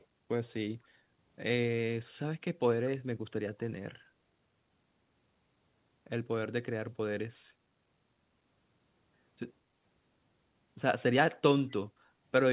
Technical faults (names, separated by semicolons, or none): echo leak; background gated by the echo canceller